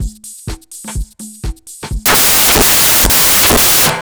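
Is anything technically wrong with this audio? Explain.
Yes. From about 2.06 s to the end, the sound is swamped by loud, harsh broadband noise. This is samples built from the wrong bytes: from that point the reader assembles each sample's bytes incorrectly, through a one-byte offset, reversed byte order or a mismatched alignment. The rapidly fluctuating low-order bits end up as the dominant part of every value, so the waveform turns into broadband noise.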